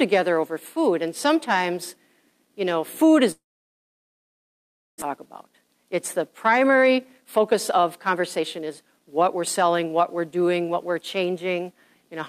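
At 3.31 s the stream most likely suffers a long network dropout: incoming audio stops until 5.04 s, and the receiver fills the gap by stretching the last sound into a brief buzzy or hissy tail that decays, leaving about 1.6 s of silence. When sound resumes, about 1 s of material has simply vanished, and the playback now trails the source by something like 0.7 s more than before.

From 5.38 s to 10.28 s a jitter buffer speed-up follows. With the buffer now holding more audio than it wants, the receiver trims short pitch-period-sized slices over and over to claw back the extra delay. Playback runs at 113% of normal speed with pitch unchanged, so the passage sounds rushed, shedding roughly 0.7 s before the pace returns to normal.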